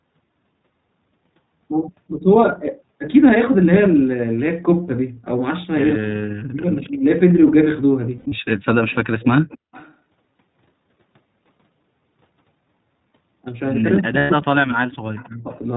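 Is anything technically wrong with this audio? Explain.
Yes. Several faults are audible in this speech.

Throughout, the speech carries iLBC codec damage. iLBC is a narrowband codec. It codes each 20 ms frame on its own. Nothing above 4 kHz survives, so the sound is dull and boxy. The coding damage is plainly audible. Speech stays clear but sounds rough and slightly synthetic. The texture fits a bitrate of about 15.2 kbps.

From 6.08 to 7.05 s, 14.0 to 14.93 s and 15.27 to 15.5 s, the speech drops away in pieces. This is speech suppressed in double talk. The likely cause is an echo canceller that heard both sides at once. It could not separate them, so it turned everything down. The deepest dips are about 40 dB in the first two spans and about 20 dB in the last.

From 8.18 to 8.39 s, there are lost iLBC frames. Around 140 ms is missing, scattered in short runs. The longest run is roughly 70 ms. 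That fits about seven 20 ms frames. A second loss runs from 14.18 to 14.31 s, about 120 ms, which fits six frames. The decoder repeats the last pitch cycle with added noise, so each gap sounds like a brief buzzy held vowel. Speech recovers at once.

From 8.89 to 9.94 s and 14.95 to 15.55 s, an echo leak is heard. A copy of the speech returns 272 ms late. It sits about 25 dB below the direct speech. The likely cause is a loudspeaker on the far side whose echo canceller missed part of the signal. The leaked copy was sent back into the call.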